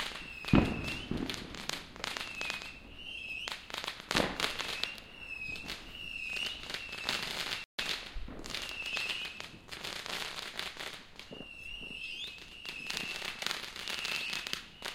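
At 7.64 s the sound cuts out completely. The silence lasts about 0.15 s, until 7.79 s. Then the audio picks up again. This is a playback stall. The gap is abrupt, with no fade in or out, so it comes across as a sudden hole. The likely cause is the player briefly running short of data, or its playback thread being held up. Output then stopped until it could feed samples again.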